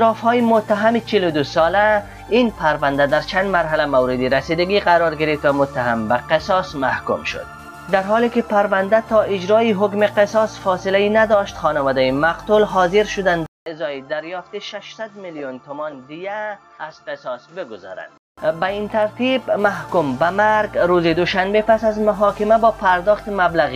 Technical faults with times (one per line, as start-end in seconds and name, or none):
13.46-18.38 input switched to a poorer device